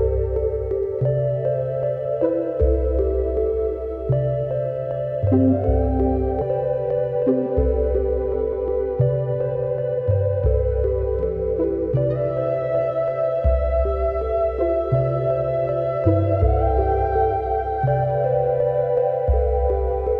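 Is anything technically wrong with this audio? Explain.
Yes. There is one skip ahead, at 6.41 to 6.43 s. About a second of audio is missing there. Playback jumps straight from the material before the cut to material a second later, with no silence or fill in between. The stream was likely either dropped in transit or discarded by an overflowing jitter buffer while later audio was already queued. The two sides join almost directly, so the sound lurches forward abruptly.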